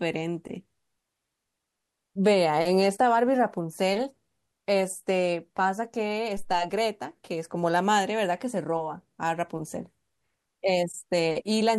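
At 6.37 s a phantom power thump lands in the speech, lasting to 6.68 s: a supply switched on or off on the live input sends a step through the coupling capacitors. It sounds like a dull low knock peaking about -27 dBFS, decaying in roughly 70 ms. The waveform shows one low-frequency swing, and the spectrogram a brief dark smear at the bottom.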